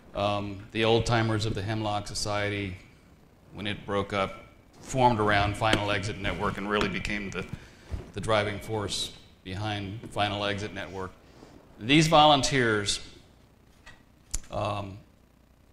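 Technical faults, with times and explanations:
Nothing technical stands out here, and you can just sit back and listen without anything getting in the way.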